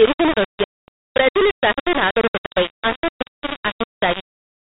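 Throughout the clip the speech carries a coarse, grainy distortion that rises and falls with the signal. The error sits nearly as loud as the speech itself, and quiet stretches sputter or drop out. This is low bit depth without dither, likely from rounding to only about 3 bits.

From 0.64 to 0.88 s there is packet loss on an ADPCM call, heard as a hard-edged 240 ms hole that fits about ten lost packets on a 32 kbit/s G.726 link. The gap is filled with silence. The decoder's adaptive predictor and step size lose track of the sender's, so the speech returns slightly distorted until it re-adapts. The same fault recurs from 2.46 to 2.52 s as a shorter 60 ms dropout.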